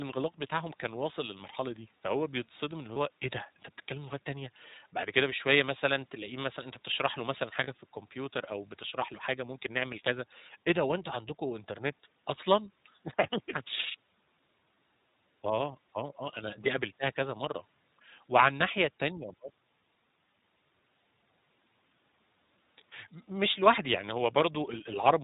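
From start to finish the speech passes through the iLBC codec, and the damage is plainly audible. Nothing above 4 kHz survives, so the sound is narrowband and dull. Each frame's excitation is coded on its own, which gives the voice a slightly rough, synthetic edge. The character fits the 15.2 kbps mode with 20 ms frames, where the coarse excitation model trades naturalness for robustness against loss.

Lost iLBC frames then appear three times: from 2.94 to 2.97 s, from 5.94 to 5.97 s, and from 7.64 to 7.68 s. Each gap is short enough to point to a single lost 20 ms frame. The decoder fills the hole by repeating the last pitch cycle blended with noise, so each spot sounds like a brief held, faintly buzzy vowel. Because the frames decode independently, the voice snaps back cleanly right after each one.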